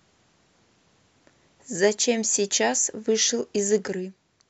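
At 3.88 s the speech drops abruptly by about 6 dB and stays at that lower level to the end of the clip. The likely cause is one channel dropping out: one side of a stereo pair went silent, so the mono sum lost half of the sound common to both channels. The step is instant rather than a gradual fade, and the tone does not change, which sets it apart from a filter or a compression artefact.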